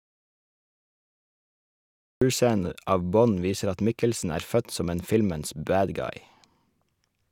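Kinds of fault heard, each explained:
Audio dropout to silence: from the first instant until 2.22 s there is silence with no room tone, then speech comes in abruptly mid-flow. The input was likely lost while recording continued, unlike a natural pause, which keeps background noise.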